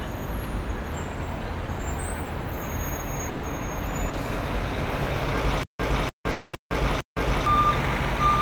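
At 3.29 s a burst of packet loss runs to 3.45 s. Roughly 140 ms of audio never arrived in time, and the receiver bridged the hole by extending the last sound it had, turning it down as the gap went on. What you hear is a held, fading continuation of the preceding sound instead of new material, and when playback picks up again the intervening 140 ms of the original is simply gone.

A short concealed packet loss follows at 4.09 to 4.15 s, covering about 40 ms. The decoder had nothing for that slot and synthesised a fill from the sound just before it, then crossfaded back into the real signal. It comes across as a brief smear or small wobble rather than a clean gap, and any short transient that fell inside those 40 ms is lost.

From 5.63 s to 7.46 s the audio turns into a stutter with silent gaps. A fragment of about 0.30 s plays, drops to dead digital silence for about 0.16 s, then the same fragment plays again, repeating on an even 0.46 s cycle four times. 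This pattern points to a stalled player or stream buffer that replayed its last chunk on each retry and then ran empty, and whatever should have played through that span does not come through.

Inside that stretch, from 6.31 to 6.55 s, sits a long network dropout of about 220 ms. With nothing arriving, the receiver kept extending the last sound and let it fade, so the gap is filled with a decaying carry-over rather than true silence. Audio resumes afterwards without the missing 220 ms, consistent with a likely interruption in the incoming network stream.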